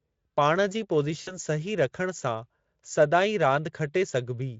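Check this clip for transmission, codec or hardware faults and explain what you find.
One transmission fault is present, in a speech clip carried by the Speex codec at light coding strength. VoIP packet loss, concealed by the speech codec, occurs from 1.21 to 1.38 s. About 60 ms of audio went missing, which fits three 20 ms frames. The decoder filled the gap by repeating its last pitch and filter settings at falling gain. The speech smears into a buzzy tone or a coloured noise that fades. It stays weak or distorted for tens of milliseconds or more after the packets return at about 1.38 s.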